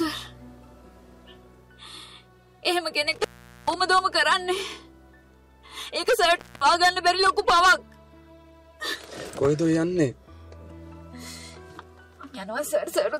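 At 3.12 s, and again at 6.36 s, the audio suffers an intermittent contact: a loose plug or cable briefly loses connection. The first event spans 3.12–3.80 s with the line open for about 0.43 s; the second spans 6.36–6.61 s, open for about 0.22 s. Each dropout is bracketed by crackle and leaves faint hiss. A waveform shows the signal collapsing to near-flat, with spiky edges, while a spectrogram shows broadband vertical streaks framing a dim, empty gap.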